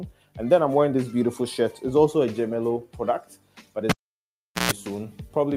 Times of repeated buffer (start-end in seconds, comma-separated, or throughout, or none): none